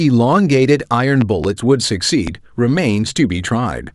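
A loud pop, actually a quick double pop, hits at 1.21 to 1.47 s, then a single one at 2.27 to 2.30 s. Both jump well above the speech, likely from a voltage spike such as a plug or switch glitch.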